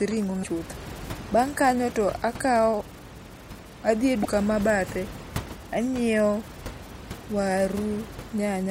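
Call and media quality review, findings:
Brief blips at 0.40–0.45 s and 4.21–4.27 s. Damaged data in the compressed stream: the decoder loses frame sync and resyncs at the next header.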